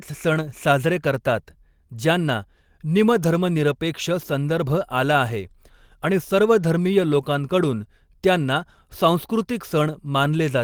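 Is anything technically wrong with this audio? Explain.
No, the speech signal shows no technical faults anywhere in the recording.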